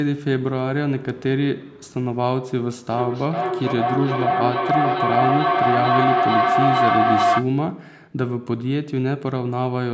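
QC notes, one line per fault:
2.91–7.57 s, feedback howl: a microphone-to-loudspeaker loop gaining level each trip builds a tone near 700 Hz, pulsing about every 0.4 s and peaking about 4 dB above the speech.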